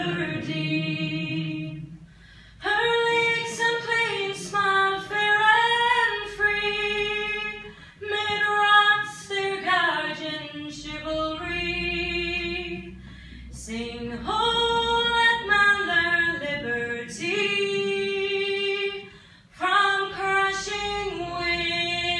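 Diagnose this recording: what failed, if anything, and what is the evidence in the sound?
Nothing failed in this recording, and there is no evidence of any fault in the sound.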